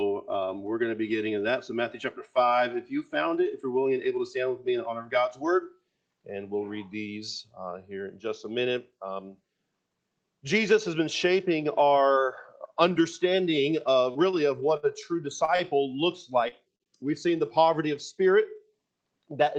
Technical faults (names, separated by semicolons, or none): repeated packet loss (robotic sound); jitter buffer speed-up; short concealed packet loss; short stall from a late packet